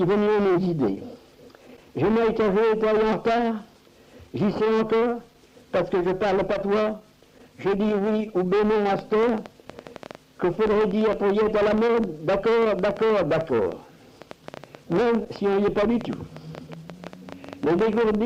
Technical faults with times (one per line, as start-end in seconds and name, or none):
8.99-18.16 train of clicks